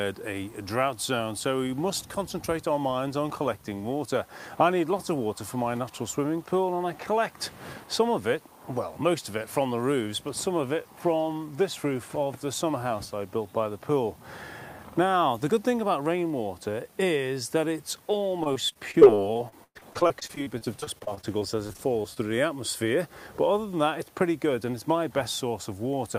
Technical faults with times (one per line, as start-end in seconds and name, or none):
18.43-22.18 repeated packet loss (robotic sound)